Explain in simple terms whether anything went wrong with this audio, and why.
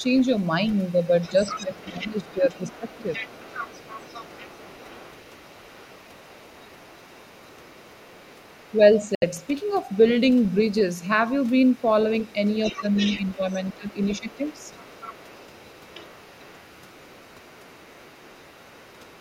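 Other side's voice leaking through runs from 0.0 to 11.07 s, briefly at 11.66 to 11.88 s, and again from 12.2 to 19.2 s. A second, much quieter voice sits faintly behind the main speech. It is likely that the talker's loudspeaker was picked up by the microphone and the echo canceller didn't fully remove it.

Speech suppressed in double talk happens between 1.29 and 3.08 s, 12.73 and 13.89 s, and 14.2 and 14.56 s. The main voice suddenly dips much quieter in patches while the other side is talking. This is likely the echo canceller, unsure which voice was which, turning both down.

A Bluetooth dropout cuts the sound out from 9.15 to 9.23 s, leaving a gap of about 70 ms before the audio carries on as if it had kept playing. The likely cause is a few wireless audio packets arriving too late for the headphones, which fits about three lost frames.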